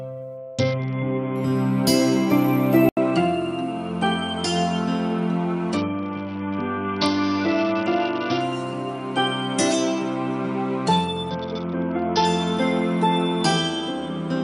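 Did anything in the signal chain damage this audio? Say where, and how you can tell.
Yes. At the codec stage, a Bluetooth SBC bit pool drop dulls the treble and adds grit at 0.37–1.36 s, 5.77–8.40 s and 11.30–12.25 s. That fits the bit pool falling from 31 to 7, around 61 kbps.

From 2.89 s there's an 80 ms gap. Then the top end stops at 10.5 kHz, the level dips a few dB, and new hiss appears, likely the input switched to a poorer device.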